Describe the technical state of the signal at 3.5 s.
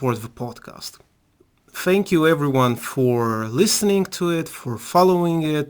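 At 3.5 s the speech carries crude rate conversion, present throughout the clip. The rate was raised from 32 kHz to 44.1 kHz by repeating nearest samples without filtering, leaving inharmonic error roughly 20 dB below the speech, heard as gritty fizz tracking loud, bright sounds.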